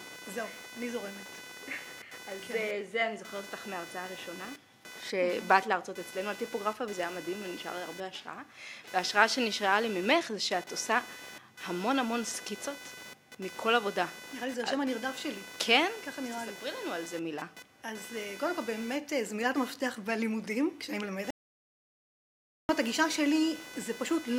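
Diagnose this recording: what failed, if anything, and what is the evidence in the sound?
A buzzing, chirping layer runs through the whole recording, pulsing at around 500 Hz and sitting roughly 15 dB below the sound itself. This is computer activity noise in the analogue wiring. Processor and graphics load shift the shared ground, so the noise tracks the computer, not the audio.

At 21.31 s the sound cuts off into complete silence with no room tone, then returns mid-flow at 22.69 s, losing about 1.39 s. This audio dropout to silence was likely a lost input at the device or driver stage while the recorder kept writing silence.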